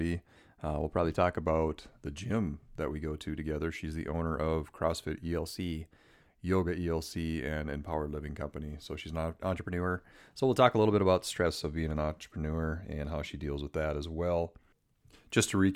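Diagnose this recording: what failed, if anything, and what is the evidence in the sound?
Drift correction step at 0.36–1.41 s, 5.34–6.21 s and 9.54–11.46 s: the speech suddenly runs 6.08% fast and rises 102 cents, about a semitone, then snaps back. This is likely a buffer-stage clock-matching resampler jumping its rate in one step to rebalance its buffer.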